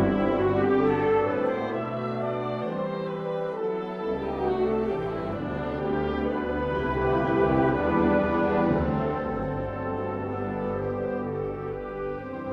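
Nothing goes wrong anywhere in this one; there's no technical fault to point to at any moment in the audio.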